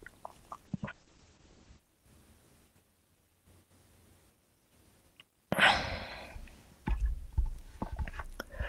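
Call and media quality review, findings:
Call bitrate drop, 0.66–1.87 s: speech rough, watery, muffled. Opus encoder starved after the bandwidth estimate fell, which fits about 32 down to 11 kbps. Spectrogram: energy above 8 kHz abruptly gone (was 20 kHz), blotchy texture below until recovery.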